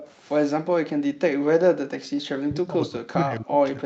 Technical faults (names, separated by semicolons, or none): echo leak; background gated by the echo canceller; speech suppressed in double talk